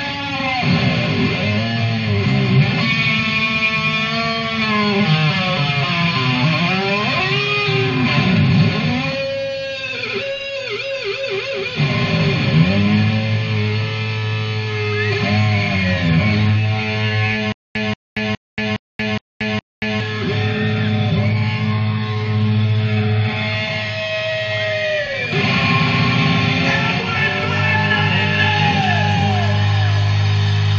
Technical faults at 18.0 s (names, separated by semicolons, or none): stutter with silent gaps